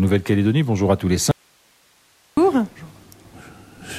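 The audio has an audio dropout to a faint residue from 1.31 s to 2.37 s. The wanted signal cuts out abruptly and is gone for about 1.06 s. Nothing fades; the break is sudden at both ends. During the gap only hiss remains, roughly 40 dB below the normal level. The likely cause is a lost source feeding a path that stayed live, so the downstream chain kept passing its own noise floor.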